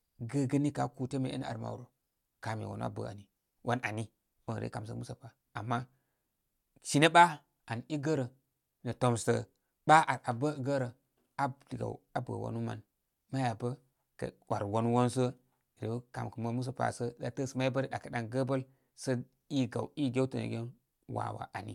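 No technical faults can be heard anywhere in the recording.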